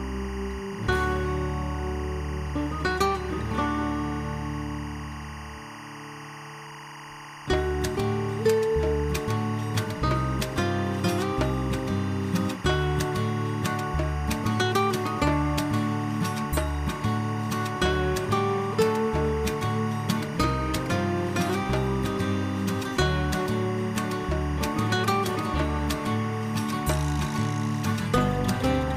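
From start to finish there's timecode bleed sitting behind the sound: linear timecode from a neighbouring track or cable leaking into the audio path. Because the code is a square wave flipping between two pitches, you hear a constant chirping warble hovering around 1 and 2 kHz. It sits at roughly 15 dB below the programme, and the rhythm of the chatter fits code running at 24 frames per second.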